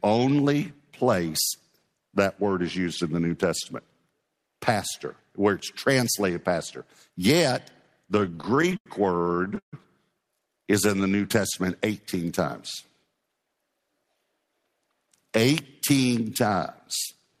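A speech recording with jitter buffer timing problems. Packets arrived late or too slowly from 8.20 to 8.87 s and again from 9.22 to 9.74 s, so the buffer kept running dry and the receiver stretched the last sound to cover each gap. The result is repeated stalls (stutter): no sound is lost, but roughly 0.2 s of filler is spread through each stretch, with the longest hold at 89 ms in the first and 143 ms in the second. At 10.53 to 11.17 s the buffer needed to build up a reserve, so it repeated individual pitch periods to add 78 ms. This jitter buffer slow-down plays that passage at 89% speed, drawn out but at unchanged pitch. From 13.21 to 13.78 s the buffer held too much audio and cut short pitch-period pieces, about 50 ms in all. This jitter buffer speed-up runs the speech at 109%, noticeably hurried at the same pitch.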